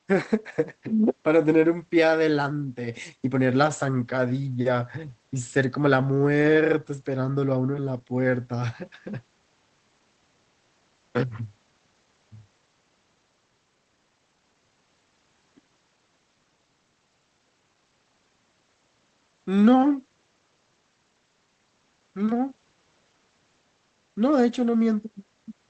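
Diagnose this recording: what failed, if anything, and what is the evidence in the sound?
Nothing failed: the speech carries only the normal character of a WebRTC call path, with the top of the band stopping near 8 kHz, which fits Opus at roughly 20 kbps, and no event anywhere in the sound points to a fault at any stage.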